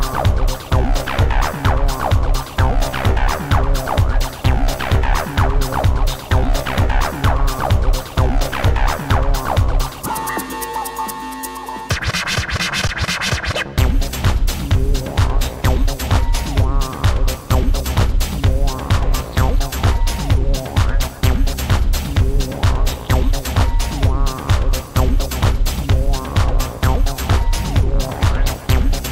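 At 12.88 s, an underrun with held sample: the buffer ran dry for 15 ms and the output froze at its last value, then resumed without skipping audio. Unlike a dropout to silence, it barely clicks.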